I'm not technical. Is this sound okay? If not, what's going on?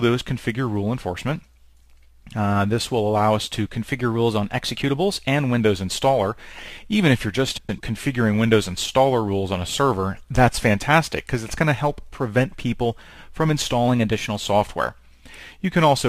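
No, there are two kinds of problems in it.

Between 3.86 and 5.60 s, and again between 13.88 and 14.45 s, everything suddenly runs about 6% fast and sits roughly a semitone sharp, then snaps back to normal. That's likely a drift correction step: software keeping two clocks in sync sped up playback in one jump to settle its buffer, so speed and pitch rose together for a moment.

At 7.57 to 7.80 s you get a brief garbled flutter. That's frames out of order: two neighbouring chunks, each about a tenth of a second, got played in swapped order, so the halves of that short stretch are reversed. Nothing is missing; it's just shuffled.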